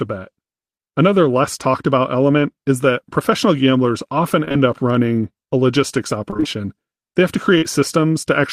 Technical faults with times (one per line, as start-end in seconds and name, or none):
4.45-4.56 short concealed packet loss
6.30-6.58 repeated packet loss (robotic sound)
7.58-7.64 short concealed packet loss